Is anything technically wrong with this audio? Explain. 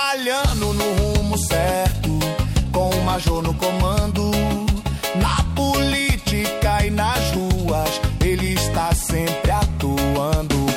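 No, nothing in this audio points to a technical problem; the signal holds steady and intact throughout.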